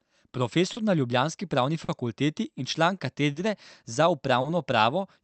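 Clock drift between sender and receiver runs through the whole speech clip. The sender's clock is running roughly 3 percent slow relative to the receiver, so the jitter buffer keeps draining and the receiver has to stretch or repeat short pieces to keep playing. The result is small, irregular timing hiccups at uneven intervals.

Four short stalls from a late packet stand out against that background. Each happens when the buffer runs empty and the last bit of sound is held until the packet arrives. The first, at 0.73 to 0.78 s just before "na ljubljanski", fills about 30 ms. The second, at 1.84 to 1.90 s, fills 40 ms. The third, at 3.32 to 3.37 s just after "in član", and the fourth, at 4.41 to 4.46 s, fill 30 ms each. Nothing is lost in any of them. Each adds its length to the playout delay and sounds like a brief held sound with a slight buzz or dip. The call codec limits the band to about 8 kHz.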